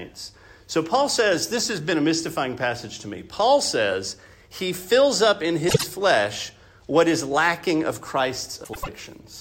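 A brief garbled flutter interrupts the audio from 5.68 to 5.84 s, and again from 8.64 to 8.89 s. These are frames out of order: two adjacent runs, about 48 ms and then 96 ms each, played swapped, with no time lost.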